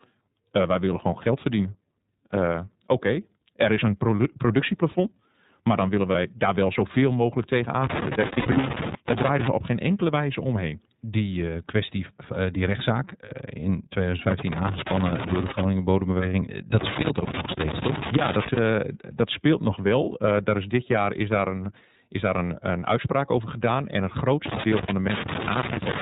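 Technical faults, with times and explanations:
Throughout: iLBC codec at about 13.3 kbps in 30 ms frames, band-limited below 4 kHz, leaving the speech plainly rough and synthetic rather than merely muffled.
6.11 s, 8.27–8.64 s, 13.26 s: lost iLBC frames, heard as brief held buzzy vowels. The first and last are single 30 ms frames, the last right after "kwestie eh die rechtszaak". The middle one is 180 ms of losses scattered over 360 ms, the longest run roughly 70 ms. Each recovers cleanly at once because iLBC frames stand alone.
7.84–9.48 s, 14.31–15.63 s, 16.79–18.59 s, 24.46–26.02 s: loose connector crackle, irregular scratchy bursts from a contact making and breaking. The first runs from after "daar wel zoveel mogelijk" to "op geen enkele wijze", and the third ends at "dat speelt nog". Unlike frame loss, the crackle chops the signal instead of sustaining a tone.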